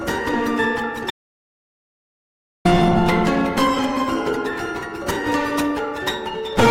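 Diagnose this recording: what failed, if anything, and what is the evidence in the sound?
The music cuts out abruptly at 1.1 s and returns at 2.65 s, leaving about 1.5 s of dead digital silence: an audio dropout to silence, likely a lost input link recorded as silence.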